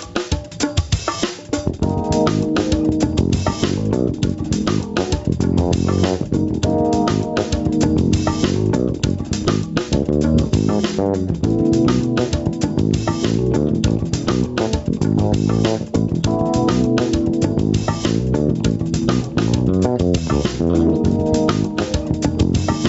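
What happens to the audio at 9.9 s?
Gain pumping, likely from input gain set far too high with a fast limiter clamping each loud sound, runs throughout, so at 9.9 s the sound is squashed, with the gain swinging by around 10 dB.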